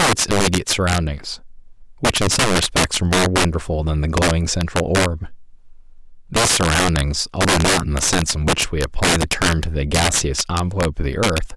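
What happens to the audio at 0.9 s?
At 0.9 s you're hearing integer overflow, and it isn't confined to that moment; it runs through the whole speech clip. The signal is pushed about 13 dB too hot, and instead of being limited at full scale, any sample past the integer ceiling wraps around to the opposite extreme. Only a few percent of samples cross that line, but each one throws a harsh, violent crack on the louder parts, far sharper and nastier than ordinary clipping.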